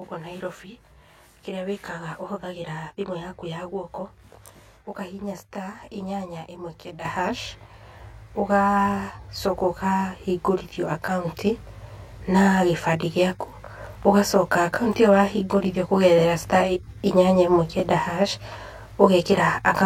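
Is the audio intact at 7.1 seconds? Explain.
No. At 7.05 s the speech and the background noise jump up together by about 8 dB in a single step and stay louder. This is a microphone volume stepped up: the call software judged the input too quiet and raised the device's input gain at once.

Across that moment, as throughout the clip, the speech also sounds rough and slightly doubled. This is channel delay (comb filtering): one channel lags the other by around 20 ms, and summing them to mono cancels evenly spaced frequencies, starting near 30 Hz.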